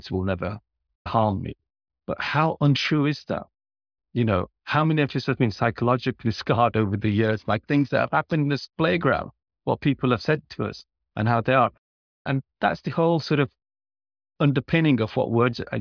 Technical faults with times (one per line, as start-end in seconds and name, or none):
none